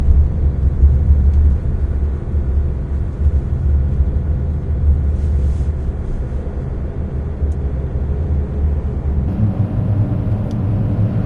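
From 9.28 s to the end, a wrong sample rate fault sets in. The samples play faster than recorded, with no conversion. Speed rises 1.45 times and pitch 6.45 semitones together. The sound turns higher and faster. This fits 22 kHz audio played at 32 kHz.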